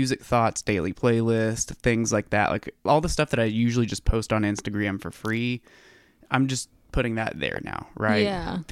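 A sudden voltage pulse, likely from a plug, switch, static discharge or driver glitch, was twice added to the signal path, producing a loud pop each time. The first, at 4.59–4.61 s between "usually just post on" and "for free", is a sharp single click about 10 dB above the speech. The second, at 7.56–7.59 s right after "just putting that there", is weaker, about 5 dB above it. The speech carries on underneath both.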